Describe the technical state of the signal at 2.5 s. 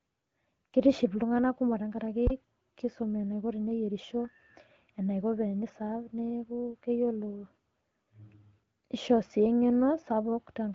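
At 2.5 s the signal sits inside a phantom power thump (2.27 to 2.72 s): a supply switched on or off on a live input sends a step through the coupling capacitors, producing a deep thump decaying in about 101 ms.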